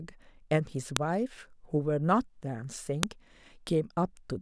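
A sharp, loud click snaps through the speech at 0.97 s and again at 3.03 s, each lasting only a moment and cutting across whatever the talker is doing. This is a file header played as audio: the recording was built from separate WAV pieces joined or streamed without stripping their headers, so a few dozen header bytes at the start of each new piece were read as sample values.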